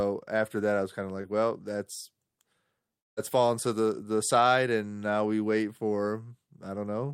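At 1.21 to 1.25 s a brief smear interrupts the speech. This is short concealed packet loss: about 20 ms of audio arrived too late for the decoder, so the receiver stretched the preceding sound over the hole and blended back into the real signal.

From 2.99 s the sound carries on as a fading buzz or hiss, then drops to silence before resuming at 3.19 s with roughly 0.18 s gone. This is likely a long network dropout, where nothing arrived and the receiver's concealment faded out.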